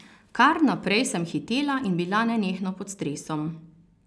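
A speech recording whose signal shows no technical fault at any point.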